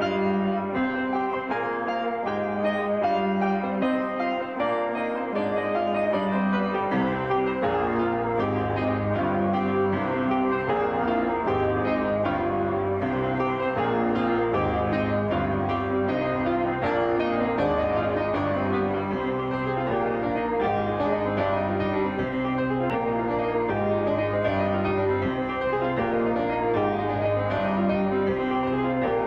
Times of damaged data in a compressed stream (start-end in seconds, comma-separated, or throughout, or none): 7.34-7.39, 22.90